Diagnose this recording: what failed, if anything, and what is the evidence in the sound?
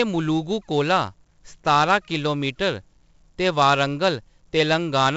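The codec stage failed: 4-bit ADPCM compression runs through the whole speech clip. Coarse 4-bit prediction steps leave a gritty hiss riding every loud syllable, with roughened attacks. A spectrogram shows level-tracking broadband noise and a hard ceiling near 7.8 kHz, pointing to about 64 kbps at 16 kHz sampling.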